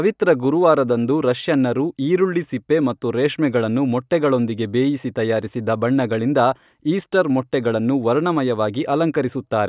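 Nothing in the recording stood out as a technical problem when listening to the speech.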